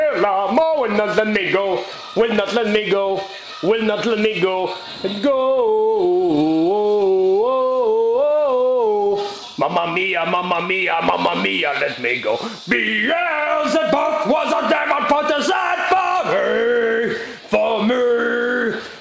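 Nothing stood out on listening; the audio comes over a call connection with its content stopping at about 8 kHz, which fits a wideband call codec.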